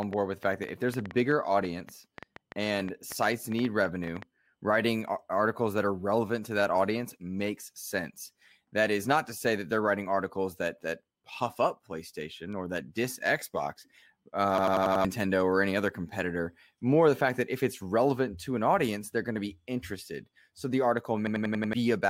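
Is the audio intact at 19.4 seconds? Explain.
Yes, at 19.4 seconds the audio runs intact, with no dropout, glitch or other fault at that moment.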